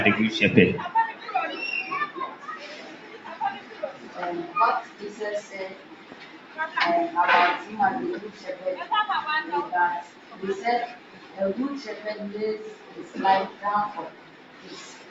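The sound pumps and thins throughout, with held parts and tails sinking while onsets punch through, a level swing of around 10 dB. This is a noise suppressor applied to music or sounds: a speech-tuned suppressor treats sustained, steady material as noise and keeps pulling it down. Distinct dips where the sound is cut by the noise suppressor occur at 1.13–1.28 s, 2.34–4.17 s, 4.85–6.58 s, 10.04–10.40 s, 10.96–11.38 s and from 12.74 s to the end, each sinking by about 6 to 7 dB as sustains are pushed below the rest. Nothing is heard above 8 kHz, consistent with an Opus call path at a bandwidth of 8 kHz.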